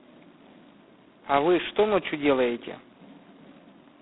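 Throughout the speech, G.726 ADPCM coding is heavy. It sends each sample as a small difference from a prediction, and the harsh, rasping hiss that tracks the speech level fits 16 kbit/s. The band runs from 200 Hz to 3.6 kHz, with nothing above 3.9 kHz.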